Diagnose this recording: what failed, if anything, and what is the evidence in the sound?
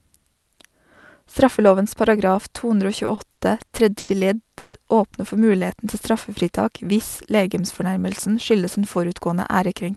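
Repeated stalls (stutter), network and jitter buffer: between 3.05 and 4.10 s the sound halts five times, the longest gap 90 ms. The spectrogram shows smeared, repeated frames where late packets were concealed.

Call audio freeze: from 4.58 to 4.75 s the sound holds as a fading buzz or hiss for 150 ms, then resumes without loss. This is likely a network delay that emptied the jitter buffer, and the waveform shows a decaying plateau.

Jitter buffer slow-down: from 5.52 to 6.13 s the audio plays at 93% speed with unchanged pitch, adding 49 ms. The waveform shows duplicated pitch periods stacked in a row.

Jitter buffer speed-up: from 8.28 to 9.62 s the audio runs at 107% speed with pitch unchanged. Roughly a tenth of a second is cut, and the spectrogram shows harmonics compressed in time.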